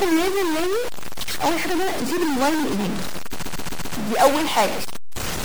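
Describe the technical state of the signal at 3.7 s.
At 3.7 s the sound sits inside a stretch of repeated frames running from 3.41 to 3.93 s. A block of about 131 ms is played four extra times, so the same fragment stutters and the audio gains 0.52 s. Unlike a dropout or skip, nothing is lost; it loops.

Underneath, a distortion is present here as across the whole clip, and it does not fade in quiet moments, where noise fills the gaps. That points to a likely stuck bit in the converter or data path. A clipping fault would instead bite only on loud peaks.

The sound is also watery and swirly, with dull treble and smeared attacks: plainly audible MP3 compression. The coding damage fits a low bitrate around 64 kbps. Unlike a simple low-pass filter, the artefacts flicker from frame to frame rather than staying steady.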